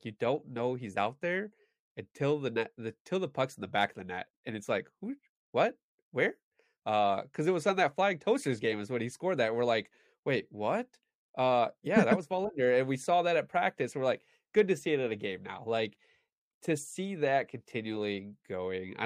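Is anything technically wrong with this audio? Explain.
No, nothing technically wrong turns up anywhere in this speech recording, so there's nothing here to flag.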